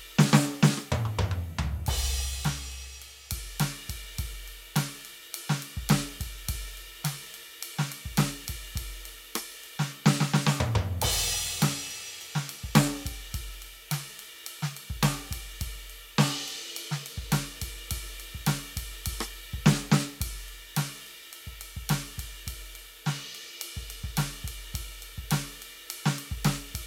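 No technical faults turn up anywhere in the music.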